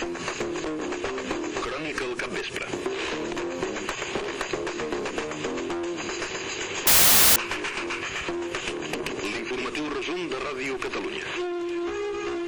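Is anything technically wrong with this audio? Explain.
Yes. From 6.87 to 7.36 s, roughly half a second, the audio turns into a burst of loud, harsh broadband noise. This is samples built from the wrong bytes: the reader assembled each sample with its bytes misaligned or in swapped order, so the rapidly fluctuating low-order bits landed in the most significant position and came out as loud noise.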